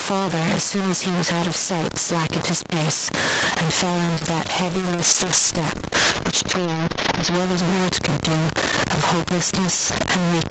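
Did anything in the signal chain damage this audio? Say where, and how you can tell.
Yes. At the sample-format conversion stage the speech was most likely truncated to very few bits without dither, which fits a 4-bit word length. Because the rounding error tracks the waveform rather than sitting as a steady hiss, it is heard throughout as a gritty, grainy distortion that changes with every syllable. The error is roughly as loud as the speech itself, and quiet tails break up and sputter between adjacent steps instead of fading smoothly.

At the input stage the gain appears to be set far too hot, with a fast limiter or compressor likely clamping it down on each loud syllable. Throughout the clip the level swings by a few decibels. Loud and soft passages end up closer in level than they should be, giving a squashed, breathing quality.

In the network and jitter buffer, a packet arrived late at 4.05 to 4.11 s. 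The buffer ran dry, so the receiver held the last sound for about 35 ms until the packet turned up, then carried on from the same point. Nothing is lost, but the sound there is stretched slightly too long, with a faint buzzy or dipped quality, and playout delay increases by about 35 ms from then on.

There is short concealed packet loss right after that stall, at 4.15 to 4.19 s and again at 4.19 to 4.23 s. Each time about 20 ms of audio never reached the decoder, and the receiver filled most of the gap by extending the preceding sound before crossfading back into real audio. The pair is heard as a brief smear or wobble in quick succession, where a short consonant could easily go missing.

A call bitrate drop at the Opus codec stage runs from 4.73 to 7.41 s. The bandwidth estimate fell and the encoder was throttled from 32 kbps to 8 kbps, staying at the bottom for about 2.6 s. With a quarter of the bits, the codec quantises the spectrum much more coarsely, so speech through that stretch turns rough and watery, then clears as the rate climbs back.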